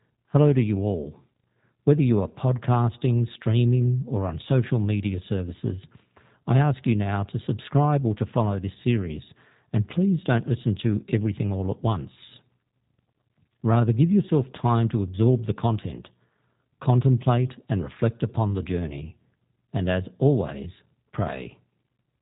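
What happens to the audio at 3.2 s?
At 3.2 s the speech carries G.729 codec damage, present throughout the clip. The codec rebuilds each short frame from a vocal tract filter, a pitch predictor and a few pulses, which fits an 8 kbit/s stream. Nothing passes above 3.8 kHz. The voice sounds rough, synthetic and muffled.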